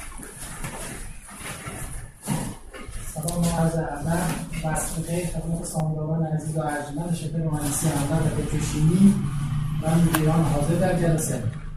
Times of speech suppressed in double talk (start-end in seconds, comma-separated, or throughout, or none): none